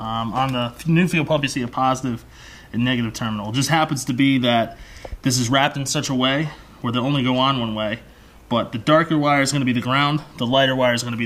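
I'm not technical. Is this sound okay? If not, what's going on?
Yes, nothing in this audio needs fixing.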